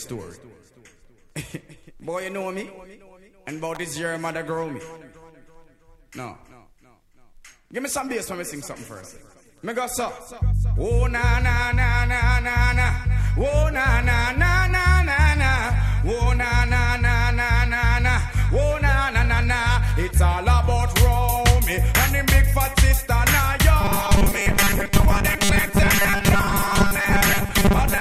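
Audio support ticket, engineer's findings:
Sharp snap at 3.75 s, added on top of the sound. Likely an electrical switching spike from a nearby arc. Nothing is lost, unlike a dropout.

23.81 s to end: rigid metallic buzz at 200 Hz. Robotic sound from repeated short buffers, likely 5 ms chunks replayed with about half the audio skipped. The fixed pitch rules out codec warble.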